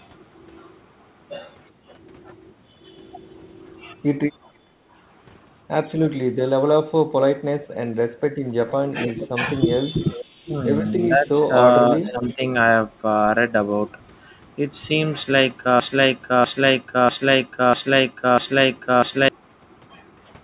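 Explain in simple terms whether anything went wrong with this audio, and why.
When both ends of the call talked at once, the echo canceller likely could not tell this talker apart from the loudspeaker echo, so it turned everything down. That is speech suppressed in double talk: the voice briefly dips or drops out in pieces around 6.34 to 6.79 s, 9.07 to 9.31 s, and 9.90 to 12.41 s.

An echo leak also comes through. The far end was likely playing the call on a loudspeaker, and its echo canceller did not remove all of that sound from what its microphone picked up. A faint copy of the voice returns about 0.47 s late, around 8.49 to 9.26 s, 9.83 to 10.25 s, and 12.06 to 12.34 s.

Finally there is a broken-record loop. The stream likely stalled and kept replaying the last piece it held. From 15.80 to 19.29 s, a 0.65 s fragment repeats five times back to back, and whatever should have played during that stretch is lost.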